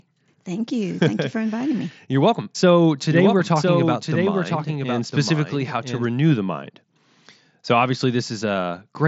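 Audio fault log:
3.11–6.05 s, doubled audio track: a full-band copy trails about a second behind, a few decibels quieter, with no reverb tail, cutting in and out abruptly and ending just before "the mind"; likely a second, slower capture path. The spectrogram shows every pattern repeated one second later.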